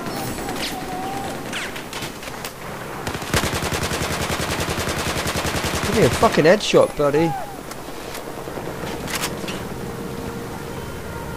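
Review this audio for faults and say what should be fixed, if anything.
Nothing needs fixing, as the signal stays continuous and steady throughout with nothing in it that calls for repair.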